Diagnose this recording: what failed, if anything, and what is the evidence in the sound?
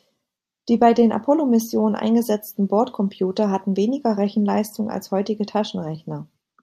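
Nothing in the signal chain has failed: the speech runs with continuous timing throughout, with no audible disturbance at any stage from capture through to playback.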